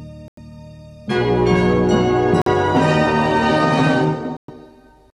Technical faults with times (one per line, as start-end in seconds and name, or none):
0.28-0.39 Bluetooth dropout
2.42-2.48 Bluetooth dropout
4.37-4.50 Bluetooth dropout